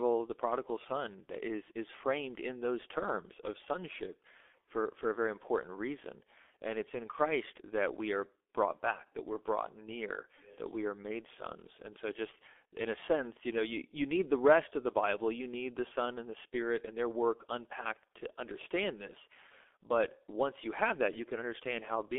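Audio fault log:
Throughout: G.723.1 codec. The speech is confined to a 300 Hz to 3.5 kHz band and sounds heavily muffled and hoarse, with smeared consonants. A plain band-limit would stay clean; this coarse, slowly updated 30 ms voice model fits about 6.3 kbit/s.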